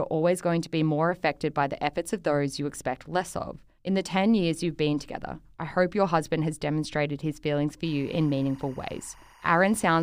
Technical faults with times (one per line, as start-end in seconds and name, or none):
7.84-10.03 timecode bleed